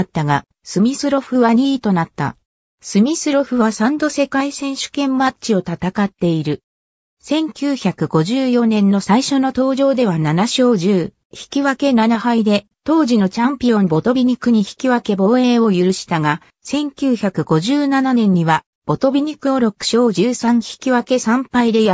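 No technical faults can be heard anywhere in the audio; the signal stays steady and intact throughout.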